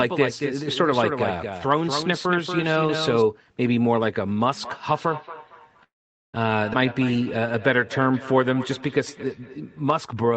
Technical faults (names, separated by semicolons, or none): doubled audio track; feedback echo between two devices; call audio freeze; skip ahead; jitter buffer slow-down